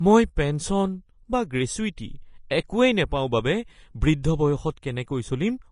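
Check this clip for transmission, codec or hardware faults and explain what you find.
One codec fault is present, running through the entire speech clip. Nothing reaches above 10.5 kHz, and the treble below that is plainly hissy and grainy, with roughened vowel tones and softened consonant attacks. The cause is likely Vorbis compression at a low quality setting, consistent with roughly 33 kbps. At that rate the encoder lowers its cut-off and quantises the upper residue so coarsely that fine spectral detail turns into noise of similar energy.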